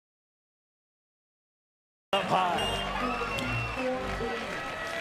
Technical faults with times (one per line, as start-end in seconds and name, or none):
0.00-2.13 audio dropout to silence